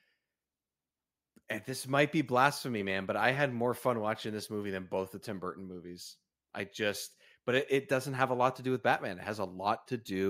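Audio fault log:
No faults are heard anywhere in this speech recording. Nothing in it calls for a timed entry.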